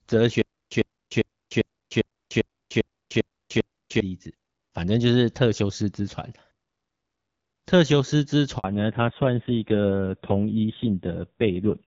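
Speech recording with a stutter with silent gaps between 0.42 and 4.0 s: a 100 ms burst repeats nine times at an even 399 ms period, each followed by about 298 ms of flat digital silence. On the waveform this looks like a comb of identical blocks, and on the spectrogram like repeated vertical slabs. It is likely a stalled player replaying its last fragment before running dry, so the audio meant for that stretch is lost. At 8.58 s a 60 ms handover gap cuts the signal. The waveform collapses to a flat line and the spectrogram shows a thin empty column, consistent with no speech frames arriving while the call switched networks. From 8.64 s to the end comes a fallback to narrowband. The spectrogram shows everything above 4 kHz removed, leaving a hard ceiling, and the voice turns duller and rougher. Before this point the wideband portion shows light AMR wideband (HD Voice) coding, and the change fits a drop from AMR-WB at 12.65 kbit/s to AMR-NB at a low rate around 5.9 kbit/s.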